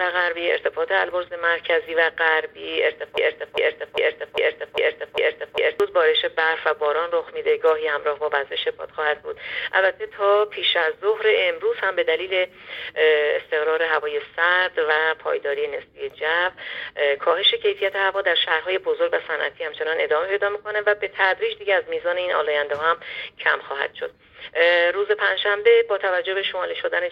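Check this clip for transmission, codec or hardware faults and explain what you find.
One fault stands out: a broken-record loop from 3.18 s to 5.80 s. A slice of sound about 0.4 s long plays seven times back to back, each pass identical, so the passage stutters in a rigid, mechanical rhythm before normal playback resumes. The likely cause is a stall in the player, encoder or stream, which kept resending the last fragment it held. Whatever audio belonged in those 2.6 seconds is lost.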